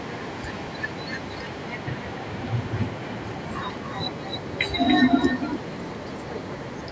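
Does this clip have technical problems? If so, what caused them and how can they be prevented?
Yes. Throughout the speech there is echo with no canceller: every phrase returns as a quieter, thinner copy about 10 dB down, arriving around 300 ms later. The far end's loudspeaker feeds its microphone, and the copy travels back across the network. Unlike room reverberation, which smears into a tail, this is a distinct delayed repeat. Enabling acoustic echo cancellation on the far end, or having that listener use a headset, prevents it.

At 3.77 s there is a small jump forward in the sound, losing only a few milliseconds. The likely cause is a dropped buffer (overrun): the software failed to collect its samples before the hardware overwrote them, so the audio on either side is spliced directly. Unlike a network dropout, it leaves no gap of silence and no smeared concealment. Larger audio buffers and a higher-priority, less heavily loaded audio thread prevent it.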